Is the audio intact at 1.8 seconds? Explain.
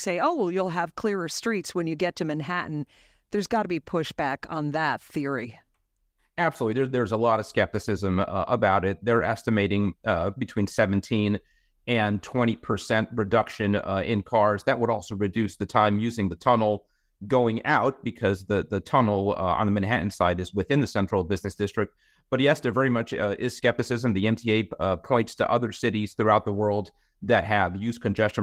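Yes, the audio is intact at 1.8 seconds, with no dropout, click or distortion there.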